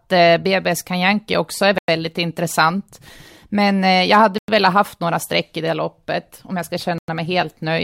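Speech with a gap between chunks at 1.78 s, 4.38 s and 6.98 s. Each 100 ms silent hole falls at a join between chunks, which run 2.5 s between holes, with no sound lost. Waveform: flat near-silent stretches. Spectrogram: clean vertical blank bands.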